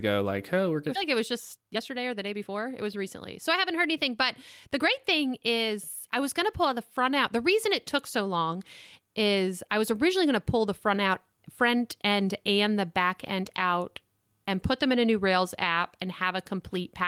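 A speech clip in which, right after "like oh we're", at 0.95 to 0.97 s, the talk lurches forward with no gap: about a second of speech is simply gone and the two sides butt together almost seamlessly. This is a skip ahead: audio that was already queued behind a backlog was discarded, most likely by an overflowing jitter buffer, so the receiver jumped straight to later material and cut the playback delay by roughly a second. Immediately afterwards, from 1.00 to 4.15 s, the speech sounds rushed, running at about 112% of normal pace while the pitch stays unchanged. That is a jitter buffer speed-up: with more audio held than the buffer's target, the receiver repeatedly trimmed out short slices one or a few pitch periods long, removing somewhere around 400 ms in total to bring the delay back down without altering the pitch.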